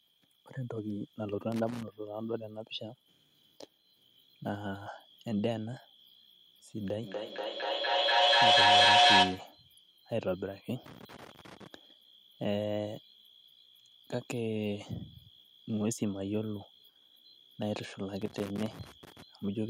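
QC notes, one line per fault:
1.52–1.83 s, 10.86–11.67 s, 18.22–19.22 s, loose connector crackle: irregular bursts of scratchy crackle, the last lasting about a second. A worn or dirty contact in the signal path is making and breaking as it shifts, chopping the audio on and off, with any DC on the line adding sharp pops. On a waveform these show as ragged dropouts and spikes. A spectrogram shows scattered broadband vertical streaks from low frequencies to the top.
7.03–9.67 s, feedback echo between two devices: the sound returns at an interval of roughly 200 ms, and the repeats build up instead of fading, peaking at about 11 dB above the speech. Two devices in the same room share the call. One plays what the other's microphone sent, and that microphone picks it up again. Neither echo canceller removes the other device's playback. A spectrogram shows stacked, evenly spaced copies of each sound, thinner and more ringing each time. 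The waveform envelope swells.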